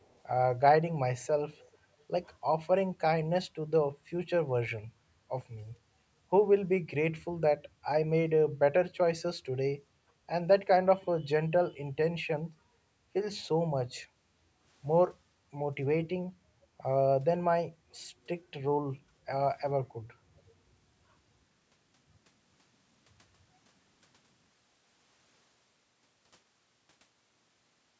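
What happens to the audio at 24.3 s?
Nothing goes wrong at 24.3 s: the speech carries on intact through that moment, with only the usual call microphone processing trimming the lowest bass and nothing present above 8 kHz.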